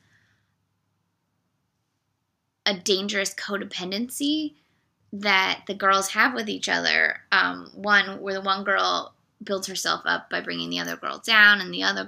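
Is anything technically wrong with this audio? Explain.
No, nothing technically wrong turns up on listening; the audio carries no audible fault.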